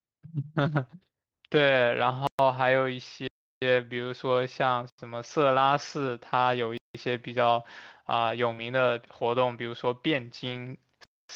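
At 0.61 to 0.67 s the speech turns briefly rough and grainy, with no break in the sound. This is a lost packet rebuilt from error correction. About 40 ms, likely two packets, never arrived. The next packets carried low-bitrate copies of them, so the decoder played those coarser versions instead of leaving a gap.

From 2.27 s the sound drops to dead digital silence several times, each cutting out and back with no fade. The holes fall at 2.27 to 2.39 s (about 119 ms), 3.28 to 3.62 s (about 341 ms), 4.90 to 4.98 s (about 85 ms) and 6.78 to 6.95 s (about 171 ms). Each is a block of digital silence, where the output buffer was filled with zeros, likely because audio wasn't delivered in time. The last three lengths are powers-of-two multiples, which fits blocks of 4096 to 16384 samples at 48 kHz.

At 8.53 to 8.59 s comes a short smear where the sound is stretched rather than cut. This is short concealed packet loss. 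About 40 ms went missing, and the receiver extended the preceding sound for roughly 35 ms before blending back. At the tail of that event, 8.57 to 8.59 s, another lost packet rebuilt from error correction covers about 20 ms with a rougher copy.

At 10.49 to 10.59 s a longer grainy patch of about 60 ms, likely three packets, is rebuilt from those low-bitrate copies. A final block of digital silence follows at 11.04 to 11.29 s, about 256 ms of zeros, cutting out and back with no fade.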